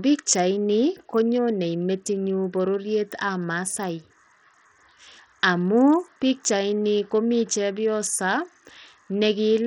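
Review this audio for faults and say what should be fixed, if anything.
Throughout the speech the treble flickers in and out while a gritty, grainy noise and aliasing ride on the sound, likely from Bluetooth SBC compression at a small bit pool, which fits roughly 64 kbps. A plain low-pass filter would dull the top cleanly, without this grit. Prevent it by recording over a wired path or raising the Bluetooth bit pool.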